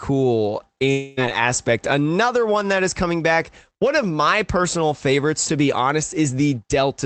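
From 0.91 to 1.19 s the speech breaks off and a fading buzz stands in for it. That fill lasts about a quarter of a second. No silence follows. The speech returns with a chunk missing. This is likely a long network dropout. The call codec's band limit near 8 kHz can be heard throughout.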